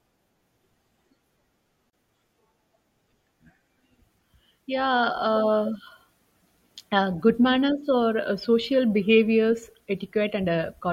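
A gap at a join of encoded pieces cuts into this speech clip from 1.90 to 1.93 s: a 32.5 ms gap with smeared edges. Separately encoded 10-second pieces were joined untrimmed, keeping encoder start delay and final-frame padding, before the sound resumes where it stopped.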